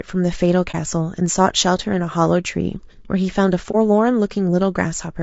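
Throughout the speech, a low-bitrate low-delay encoder has likely been at work, with the grain and roughness pointing to low-delay AAC compression (AAC-ELD) at around 32 kbps. At this low bitrate, noise fills the gaps between the pitch harmonics and the top band sounds thin and synthetic. The damage is plainly audible as a rough, grainy texture on the voice for the whole clip.

At 0.71 s and again at 3.71 s, the decoder received no data for a stretch of the stream and zeroed that spectrum. This is AAC frame loss with muting. Each gap fits a single lost frame of about 30 ms. The overlapping windows fade the sound out and back in, so each one is heard as a brief, soft-edged dropout lasting roughly 0.04 to 0.05 s. Each is a brief dip in the sound.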